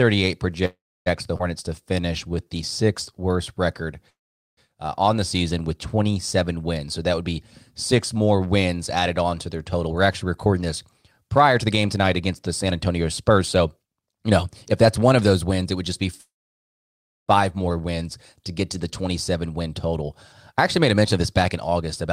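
Packets were most likely held up and the jitter buffer ran dry at 0.65 to 1.08 s, a call audio freeze: the last sound is stretched into a fading buzz that drops to silence for about 0.29 s. The audio then resumes where it stopped, with nothing lost.

A skip ahead follows at 1.38 to 1.41 s. Roughly a tenth of a second of audio was discarded and playback jumps straight across the cut with almost no gap.

From 1.82 to 2.46 s, just before "the sixth worst record", the jitter buffer slow-down repeats pitch periods to rebuild its reserve. This adds 85 ms, so the sound runs at 88% speed at unchanged pitch and is drawn out.

Two more freezes fill delay with fading buzz that then goes silent. The first, at 4.10 to 4.59 s, falls between "the sixth worst record" and "uh on the season" and is silent for about 0.43 s. The second, at 16.21 to 17.30 s, comes just before "more wins to get" and is silent for about a second.

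A jitter buffer speed-up runs from 6.86 to 15.91 s. Having built up too much delay, the buffer trims short pitch-period pieces, about a second in total, so the audio plays hurried at 110% speed with unchanged pitch. The same happens at 19.13 to 22.07 s at 108%, removing about 0.2 s.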